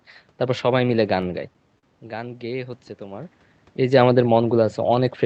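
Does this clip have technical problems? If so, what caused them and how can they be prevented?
Yes. Between 1.21 and 1.86 s there are repeated stalls (stutter): four brief holds, the longest 43 ms, covering about 12% of that stretch. Packets arrived late, the jitter buffer kept running dry, and the receiver stretched the last sound until data resumed. Nothing is lost, which sets this apart from packet-loss dropouts, where parts go missing; here the speech only drags. A deeper or adaptive jitter buffer on a steadier network would prevent it.

From 2.03 to 4.08 s, automatic gain rising lifts the level by about 3 dB. The speech at the microphone had fallen by about 12 dB as the talker moved away, so the gain control slowly turned itself up. Unlike a talker simply leaning closer, which changes only the voice, the room noise swells along with the speech over that two-second stretch. Keeping a steady distance from the microphone, or using slower or capped gain control, would prevent it.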